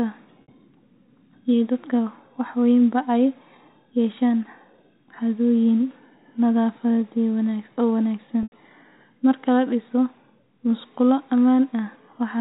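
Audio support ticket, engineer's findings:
Packet loss with pitch repetition, 0.42 to 0.48 s: 60 ms gap bridged by a held, buzzy repeat of the last pitch period. Fits two lost packets. Receiver concealment, not a dropout: the gap is filled, not silent.

Same fault at 8.43 to 8.52 s, right after "oo wanaagsan": 90 ms, likely three packets. Repeated cycle fades toward silence, then cross-fades back. G.711 band-limit to 4 kHz throughout.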